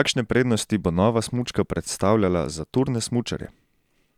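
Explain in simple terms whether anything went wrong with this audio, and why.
Nothing went wrong here: the speech recording has no audible technical faults anywhere in it.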